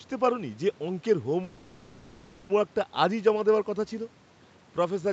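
From 1.43 s to 2.51 s the speech stalls into a call audio freeze: the last sound stretches into a fading buzz for about 1.06 s, then speech resumes where it stopped, likely because late packets drained the jitter buffer. A spectrogram shows horizontal smeared bands decaying.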